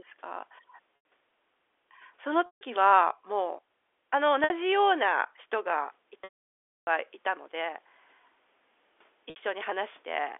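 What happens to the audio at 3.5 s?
Nothing goes wrong at 3.5 s: the speech there carries on intact through the ordinary G.711 telephone band, which holds it to roughly 300 Hz to 3.5 kHz.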